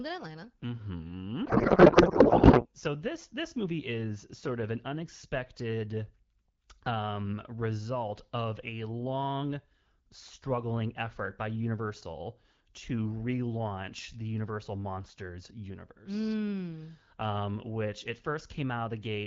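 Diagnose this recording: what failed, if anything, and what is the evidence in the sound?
A codec payload misread at the codec stage: from 1.45 to 2.67 s, just before "so this this movie", the speech is replaced by garbled noise and warble that barely tracks it. The receiver is placing the AMR-WB bit fields in the wrong positions. The pattern points to octet-aligned frames being unpacked as bandwidth-efficient ones. Because the frames still decode as valid, the output becomes nonsense rather than silence, until both ends agree on the packing again.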